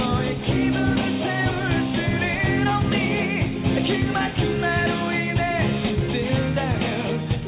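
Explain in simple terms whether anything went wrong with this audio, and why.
Nothing went wrong with this audio that I can hear.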